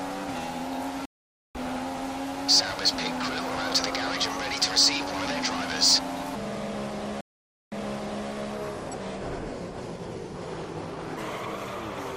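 At 1.05 s there's a stream reconnect: the audio drops out for about 0.49 s while the connection re-establishes, then picks up roughly half a second further on. From 6.35 to 11.17 s the section plays at the wrong speed, 0.76 times normal and about five semitones lower, so it sounds slow and deep, likely from a clock mismatch. Inside that stretch, at 7.21 s, another reconnect leaves 0.51 s of silence, and playback restarts 0.58 s earlier, repeating a bit of audio.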